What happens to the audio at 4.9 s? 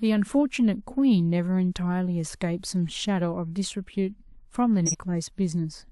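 From 4.86 to 4.95 s a corrupt frame decoded: flipped bits in about two compressed frames were played anyway, placing energy at the wrong frequencies. It is a fairly loud burst of wrongly placed sound, not the silence or smeared repeat of a lost frame.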